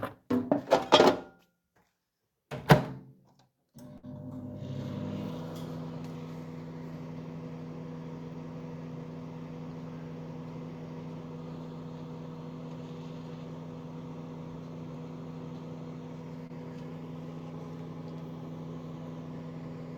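At 3.97 s a burst of packet loss interrupts the audio until about 4.05 s. A run of packets failed to arrive in time, so the receiver stretched the last received sound for about 55 ms and faded it down. Playback then resumes with about 60 ms of the original missing. On a spectrogram the energy smears horizontally into a flat, dimming band before an abrupt restart. The waveform shows a repetitive, shrinking envelope followed by a discontinuity.

Near 16.47 s there is a short concealed packet loss, lasting until about 16.51 s. Roughly 20 ms of audio never reached the decoder, and about 24 ms of synthesized continuation was blended in to cover it. The result is a quick smear or wobble rather than a clear gap. A spectrogram shows a thin vertical stripe where the fine detail blurs briefly. The waveform has a slightly too-regular stretch with no silence.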